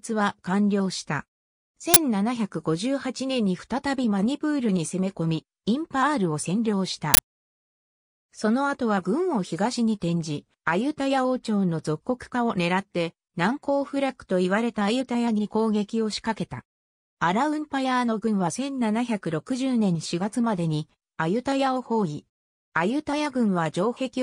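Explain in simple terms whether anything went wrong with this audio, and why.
Two brief, harsh bursts of digital noise cut in, at 1.94 seconds and at 7.14 seconds. They're much louder than the surrounding sound and last only about 23 and 47 thousandths of a second. This is an uninitialised buffer fault: the playback system sent out a chunk of memory before any real audio had been written into it, so leftover junk data was played as sound. The lengths fit chunks of 1024 and 2048 samples.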